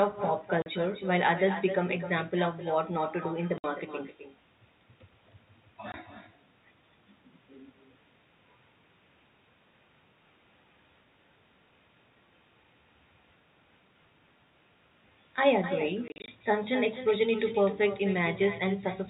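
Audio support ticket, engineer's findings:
Speech shadowed throughout by a quieter, thinner repeat roughly 0.3 s behind, at about 11 dB down. Echo with no canceller: far-end loudspeaker leaks into its microphone, returned uncancelled.

Hard-edged dropouts at 0.62 s (40 ms), 3.58 s (60 ms), 5.92 s (20 ms), plus scattered holes 16.08–16.28 s, longest 40 ms. Packet loss filled with silence; gaps fit 20 ms packets. Band-limited G.711 telephone sound audible beneath.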